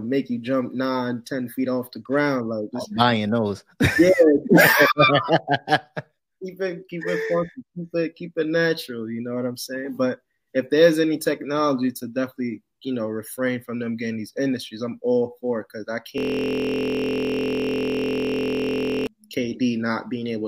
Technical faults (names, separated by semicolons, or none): system hang loop